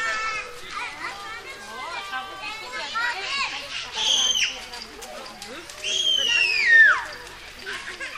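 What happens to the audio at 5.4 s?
Nothing goes wrong at 5.4 s; the audio plays through that moment intact, with no dropout, click or distortion.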